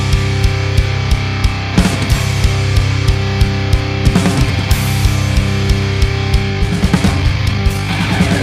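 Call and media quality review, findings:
Sudden rushed pace from 6.49 s to the end at 8.43 s, pitch unchanged. Time-stretched section, sped up about 1.54x. Likely a time-scale stage compressing the segment to fit a length by dropping short overlapping pieces while holding pitch.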